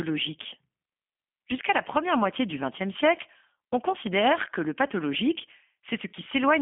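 G.729 codec coding runs throughout, rebuilding the speech from a vocal tract filter, a pitch predictor and sparse pulses, which fits an 8 kbit/s stream. Nothing passes above 3.5 kHz on a 250 Hz to 3.4 kHz line band, and the plainly audible damage leaves the speech rough and synthetic.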